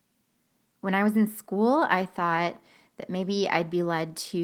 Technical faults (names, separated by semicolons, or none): none